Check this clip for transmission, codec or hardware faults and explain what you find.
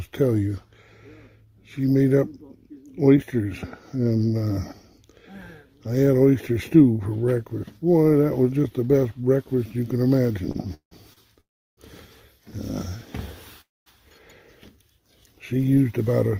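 The clip has network delivery faults: two short stalls from late packets, three call audio freezes, and a jitter buffer speed-up near the end.

Short stall from a late packet, at 10.51–10.56 s and 11.13–11.19 s. Each time a packet missed its playout deadline and the jitter buffer emptied. The receiver held the last sound for 28 ms and then 32 ms until the packet turned up, and playback resumed from the same point. Nothing is lost, but the sound hangs briefly with a slight buzzy smear.

Call audio freeze, at 10.74–10.93 s, 11.41–11.79 s and 13.61–13.88 s. These were likely caused by packets held up in transit long enough to drain the jitter buffer completely. The receiver extended the last sound as a fading buzz, which falls to silence for about 120 ms, 350 ms and 230 ms. When the packets arrive, the audio continues where it stopped. The freezes insert gaps of 171, 366 and 251 ms rather than removing any sound.

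Jitter buffer speed-up, at 15.84–16.38 s. The buffer held more audio than its target. To shed the excess delay, the receiver cut many short pitch-period slices in quick succession, around 70 ms in total. Playback runs at about 112% speed with the pitch unchanged, so the closing stretch sounds hurried.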